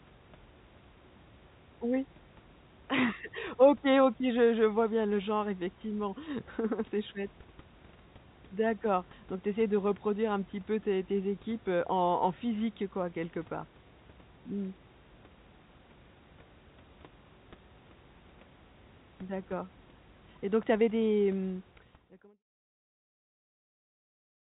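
This speech clip has nothing technically wrong with it.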